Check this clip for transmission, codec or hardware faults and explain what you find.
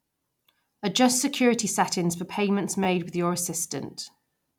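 One hardware-side fault is audible. At 2.84 to 2.86 s, after "security settings for payments" and before "with your", a brief buzzy click interrupts the speech. This is a repeated buffer: a 10 ms chunk of speech plays twice more because fresh audio arrived late. The hard joins between repeats make the buzz, and no speech appears to be lost.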